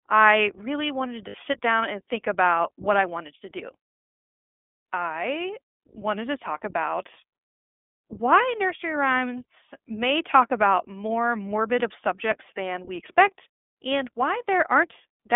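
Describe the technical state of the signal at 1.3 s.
At 1.3 s the speech briefly turns into a held, slightly buzzy, breathy vowel, from 1.28 to 1.36 s, between "I really wanted" and "sit down and think". These are lost iLBC frames. About 60 ms of audio went missing, which fits three 20 ms packets, and the decoder filled the gap by repeating the last pitch cycle mixed with noise. Because each iLBC frame is decoded independently, the voice snaps back right after the gap.

Around that moment the whole signal also carries plainly audible iLBC codec damage. The speech sounds narrow and slightly rough and synthetic, confined to a telephone band of about 200 Hz to 3.5 kHz, with nothing audible above it. iLBC codes the excitation of each 20 ms frame on its own, without relying on earlier frames, and the sound fits its 15.2 kbps mode. That buys resilience to loss at the cost of that rough, synthetic texture.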